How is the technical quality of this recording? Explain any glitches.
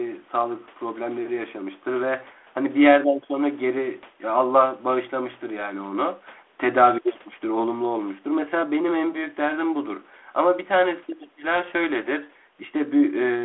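Nothing in this recording sounds like a glitch, so there's nothing to point out here.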